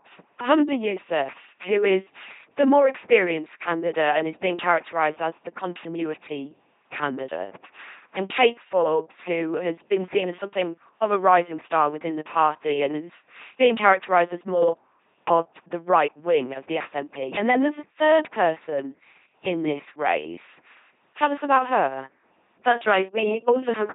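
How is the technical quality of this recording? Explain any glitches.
Technical quality is poor. The speech has been through an LPC-10 vocoder for the whole clip. LPC-10 models the vocal tract as a simple filter. It excites that filter with either a pulse train or noise, never a mix. Each moment is forced to be fully voiced or fully unvoiced. The damage is heavy. The speech sounds buzzy and robotic, with stray buzz or hiss where voicing is misjudged. Nothing is present above 3.8 kHz, which fits a 2.4 kbit/s coder.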